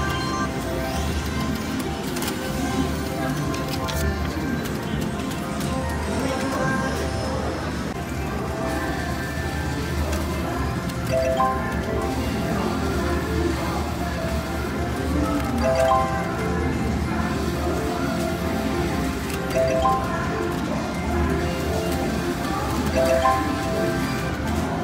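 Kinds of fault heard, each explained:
No audible faults are present anywhere in this recording.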